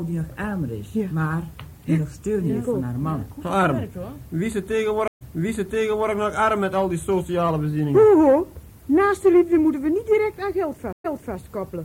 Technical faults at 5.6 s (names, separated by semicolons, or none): stream reconnect